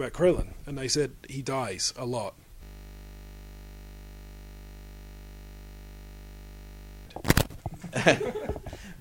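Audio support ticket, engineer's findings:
System hang loop, 2.63 to 7.07 s. Steady 50 Hz buzz replaces the audio for about 4.4 s. Probable component: host driver or system froze while the audio interface kept reading its ring buffer. One 20 ms slice repeats exactly, over 200 times, so the loop rate is heard as a tone. Points to a buffer of about 20 ms. Audio resumes after release.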